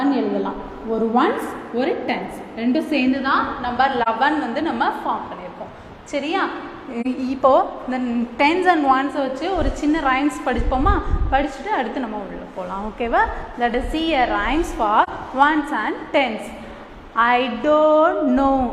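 Three brief soft-edged gaps, at 4.02–4.08 s, 7.01–7.07 s and 15.03–15.09 s, are AAC frame loss with muting: each silence lasts about 43 ms, fitting one zeroed AAC frame, and overlapping windows fade the audio out and back.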